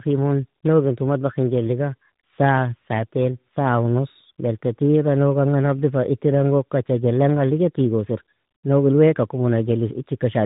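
From start to end the speech carries tandem speech coding: it was decoded and re-encoded at least twice, each coder reworking the previous one's damage. Nothing reaches above 3.8 kHz, and the roughness and watery warble point to an ADPCM stage followed by an AMR-NB-like coder. Unlike a single narrowband codec, which degrades the speech less, the artefacts stack: the speech turns rough, noisy and warbly rather than simply sounding band-limited.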